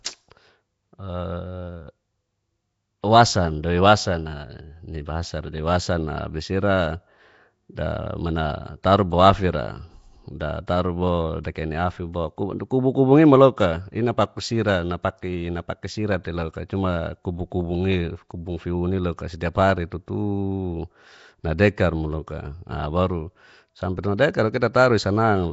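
Throughout, the speech has a rough, hissy halo and smeared, underwater texture with nothing above 7.7 kHz, likely Nellymoser compression at around 32 kbps starving weak bands.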